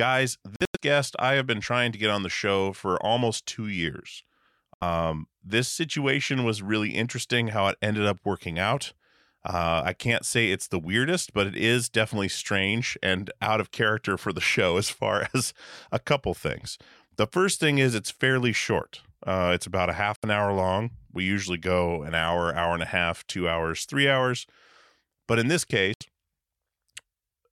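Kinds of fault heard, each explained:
Bluetooth dropout: speech abruptly drops to silence, likely because packets reached the headphones too late, in broken gaps between 0.56 and 0.80 s and about 70 ms of holes at 4.74, 20.16 and 25.94 s. Unlike an edit cut, speech resumes as if it had kept playing.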